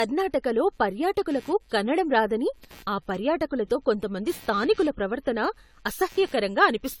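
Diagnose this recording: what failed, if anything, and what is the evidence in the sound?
The analogue ground shared between the computer and the audio circuit is being disturbed by processor and graphics load. The result is computer activity noise, a buzzing, chirping texture pulsing at around 100 times per second and sitting roughly 30 dB below the speech for the whole recording.

At the codec stage, the speech sounds swirly, smeared and hollow, and consonant attacks are blurred. There is nothing above 20 kHz. This is likely generation loss from about ten AAC-LC re-encodes, consistent with 96 kbit/s, each pass quantising on a shifted frame grid.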